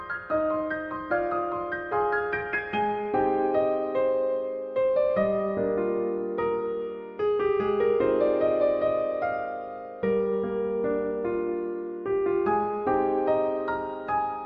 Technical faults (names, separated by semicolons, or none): none